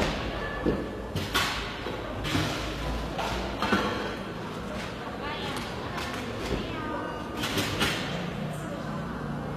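From start to finish the treble sounds gritty and metallic, plainly damaged, which points to HE-AAC compression at a low rate around 24 kbps as the likely cause. The upper band is rebuilt from copied lower bands, showing on a spectrogram as smeared, repeated patches over a hard ceiling at 14.9 kHz.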